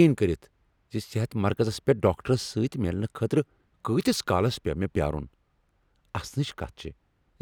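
No technical faults are audible anywhere in this speech.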